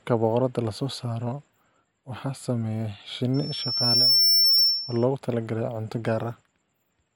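From 3.34 s to 5.05 s a loudspeaker feedback squeal appears: a pure tone near 5.4 kHz swells over well under a second to roughly 10 dB above the speech, because the microphone is re-amplifying its own loudspeaker with loop gain above unity at that frequency.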